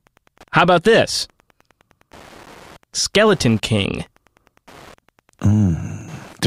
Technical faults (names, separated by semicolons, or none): Wi-Fi interference